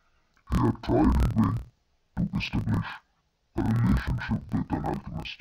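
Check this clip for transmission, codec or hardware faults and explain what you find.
One fault runs through the whole speech clip: interleaved audio read as planar. From start to finish the speech sounds an octave low, doubled and choppy, breaking up 38.3 times a second. Each 26.12 ms block of alternating left-right samples is split into halves taken as separate channels, so each half plays at half speed while the overall pace holds.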